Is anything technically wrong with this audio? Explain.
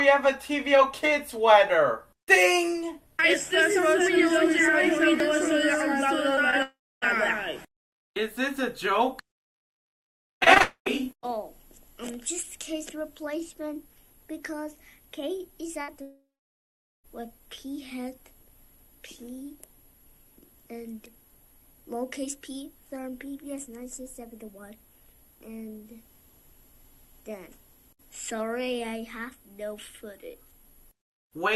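Yes, the audio has several network-related faults.

Scattered short gaps appear from 6.35 to 7.06 s: about three tiny holes, the longest around 15 ms, where packets went missing and the receiver stretched the preceding sound to cover them. Around 40 ms of audio is lost in total, so the result is a few quick ticks or smears rather than obvious breaks. In the middle of this stretch, from 6.62 to 7.04 s, the sound likely suffers a long network dropout: about 400 ms never arrives, the continued sound fades out, and roughly 280 ms of near-silence follows before audio resumes with that portion skipped.

Repeated packet loss gives a robotic sound from 10.10 to 10.90 s. Nine separate gaps, the longest 76 ms, cut out about 180 ms in all, and each is patched by extending the last sound, so nearly a quarter of this span is synthetic fill. The rapid alternation of real and patched audio makes it choppy. 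From 10.62 to 10.88 s this likely becomes a long network dropout, with 240 ms missing and about 100 ms left as quiet.

A burst of packet loss hits from 15.82 to 15.90 s, removing about 60 ms in one run. The receiver holds and fades the last sound across the hole, so a brief buzz or fading hiss replaces the lost piece before playback jumps ahead.

A long network dropout then likely follows from 16.02 to 17.06 s, the longest break in the clip. About 1020 ms of audio never arrives. The last sound is carried briefly as a decaying buzz or hiss, then about 800 ms of silence or low steady noise remains until audio picks up again, with that second's worth gone.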